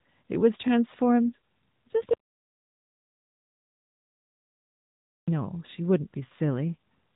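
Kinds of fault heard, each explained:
AMR narrowband mobile codec: The speech has been rebuilt by the mobile speech codec from a vocal-tract model, so nothing above 3.8 kHz remains and a plainly buzzy, synthetic edge runs throughout, which fits a rate near 10.2 kbps. Simple low-pass filtering would only dull the sound, without this artificial grain.
Audio dropout to silence: From 2.14 s to 5.28 s, about 3.1 s, the speech cuts off mid-flow into silence with no room tone, then returns abruptly. The likely cause is a lost input or stray mute; a codec packet-loss gap would instead be filled with noise or smeared sound.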